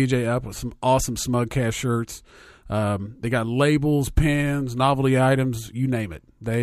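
Nothing stood out as a fault anywhere on listening to this speech recording.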